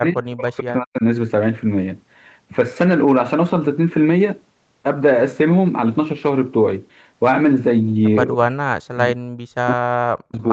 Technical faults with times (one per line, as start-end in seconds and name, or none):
0.00-1.04 speech suppressed in double talk
8.34-9.34 speech suppressed in double talk
9.68-10.41 speech suppressed in double talk